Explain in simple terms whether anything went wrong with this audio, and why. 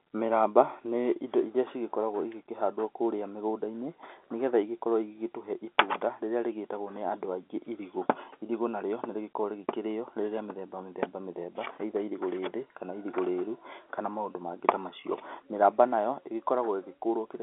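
Nothing went wrong: the speech comes through an ordinary telephone line using standard G.711 telephone coding, which keeps sound roughly between 300 Hz and 3.5 kHz and passes nothing above about 3.8 kHz, so the thin, boxy phone quality is simply how a normal phone call sounds rather than a fault.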